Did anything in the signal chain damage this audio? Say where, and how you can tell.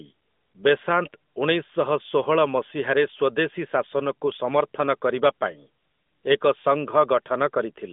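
No, nothing in the chain damaged this speech; it arrives as a narrowband mobile call, band-limited to roughly 200 Hz to 3.6 kHz by the AMR narrowband codec, whose light coding texture fits its 12.2 kbps top mode.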